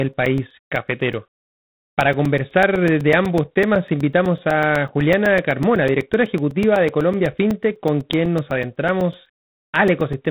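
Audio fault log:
throughout: G.726 ADPCM. A rasping hiss rises and falls with the speech level and nothing passes above 3.9 kHz, which fits coarse 24 kbit/s coding rather than steady background noise.
0.13 to 10.26 s: periodic USB or driver dropouts. Around 70 ticks, each a roughly 4 ms gap of silence, recur every 0.125 s. This strict clockwork spacing separates them from random network packet loss.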